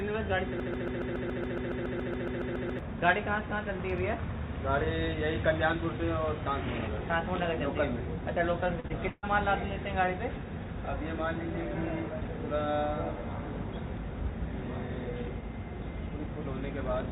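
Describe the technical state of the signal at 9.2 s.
At 9.2 s there is a burst of packet loss, from 9.09 to 9.25 s. About 140 ms of audio is missing. The receiver stretched the last sound for 133 ms while fading it, leaving a brief 30 ms silence before the sound resumes further on.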